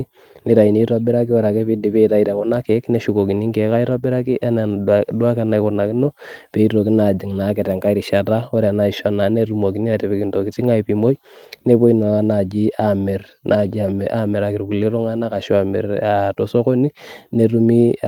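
No technical faults can be heard anywhere in this speech recording. There is no point in it where a time needs to be marked.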